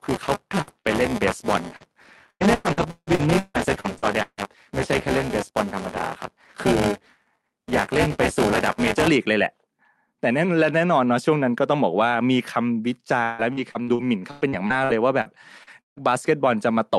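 A robotic 200 Hz rattle runs under the speech from the start to 9.08 s. This is buffer tearing: the writer and reader of a ring buffer have slipped, so roughly a fifth of each period replays audio about 20 ms old, with hard joins that buzz at the buffer rate. From 0.61 to 0.70 s the last sound is held and fades, then the audio jumps ahead. This is a burst of packet loss, with 57 ms filled by continuing the last sound and 40 ms of real audio lost. Inside that span, from 0.67 to 0.69 s, and again from 0.84 to 0.86 s, the sound turns briefly rough and noisy. Each time a lost packet was rebuilt from error correction, with the decoder playing the low-bitrate Opus copy carried in the following packet. The brief smear from 0.81 to 0.87 s is short concealed packet loss: 34 ms were filled from the preceding sound, covering 40 ms that never arrived in time. From 1.76 to 4.39 s, and again from 13.23 to 15.98 s, the speech turns choppy with pieces missing. 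This is repeated packet loss, with 10 and then 12 gaps. The longest gaps are 162 ms and 157 ms, and concealment covers about a third of the first stretch and just over a quarter of the second. Throughout, the audio stops at 12 kHz, which fits a 64 kbps Opus call path.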